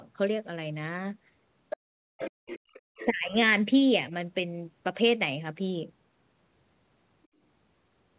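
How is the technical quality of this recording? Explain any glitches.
Two related glitches occur between 1.7 and 3.35 s. Both come from echo cancellation on a call. Nothing is heard above 4 kHz, which points to a G.711 mu-law call path at 64 kbps.

Other side's voice leaking through appears at 1.7 to 1.77 s, 2.19 to 2.8 s and 2.96 to 3.06 s. A second voice sits about 10 dB below the talker, and about 15 dB below in the last stretch. The likely cause is loudspeaker echo that the canceller failed to remove.

Speech suppressed in double talk appears at 1.81 to 2.22 s, 2.55 to 2.61 s and 3.1 to 3.35 s. The talker's speech drops sharply, by as much as about 40 dB and by about 25 dB in the last gap. This likely happens because the canceller mistook the talker for echo and ducked both voices together.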